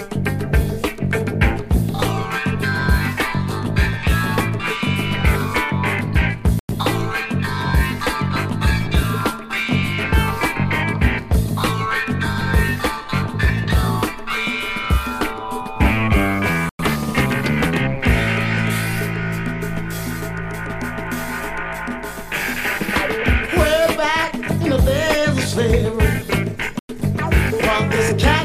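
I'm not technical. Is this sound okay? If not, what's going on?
No. There is a gap between chunks at 6.59, 16.69 and 26.79 seconds: three short silences, each a tenth of a second long, about ten seconds apart. The audio appears to have been split into 10-second pieces, and a small pause was left where each piece joins the next. Nothing is missing; the sound simply stops briefly and then resumes where it left off.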